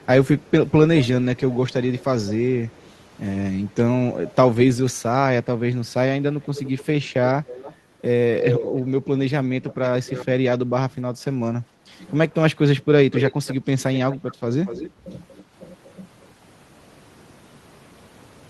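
A faint, delayed repeat of the speech trails it from 2.74 to 2.89 s, 204 ms late and barely audible. Clearer repeats, 291 ms behind, follow at 6.41 to 7.76 s and 9.62 to 10.25 s. From 13.12 to 15.93 s a strong copy runs 236 ms late, only a little quieter than the speech. This is echo leak, likely from a loudspeaker at one end whose echo canceller let part of its microphone pickup travel back.

At 11.66 to 11.89 s the room sound dips by about 9 dB for around a fifth of a second, then recovers. This is background gated by the echo canceller, which turned the microphone down sharply while its loudspeaker was playing.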